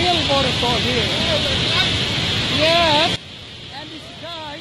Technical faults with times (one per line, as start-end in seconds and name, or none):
3.16-4.60 sudden gain jump